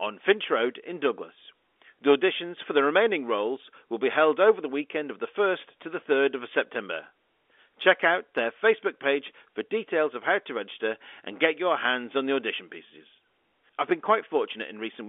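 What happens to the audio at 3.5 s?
Nothing goes wrong at 3.5 s: the speech carries on intact through the narrow telephone band of the G.711 line, with no break or new disturbance at that point.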